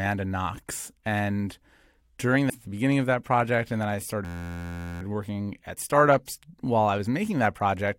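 At 2.49 s, just before "at the beginning of", the speech jumps ahead with a small blip, likely a stream segment skipped, dropping a chunk of programme. From 4.25 to 5.02 s, after "project and then I", a system hang loop repeats one 11.61 ms piece about 66 times, a steady 86.1 Hz buzz, which fits a 512-sample buffer.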